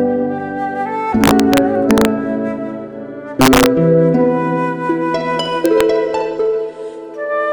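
Integer overflow cracks through the sound from 1.24 to 2.05 s, from 3.41 to 3.66 s, and from 5.66 to 5.81 s. Peaks pushed about 3 dB, 2 dB and 0 dB into the limit wrap to the opposite sign instead of being limited. On a waveform they jump rail to rail, and on a spectrogram they show as bright full-band vertical streaks.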